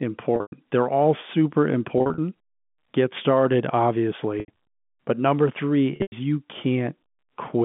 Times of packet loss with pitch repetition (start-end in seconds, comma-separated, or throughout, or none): 0.36-0.52, 1.98-2.18, 4.40-4.48, 5.96-6.12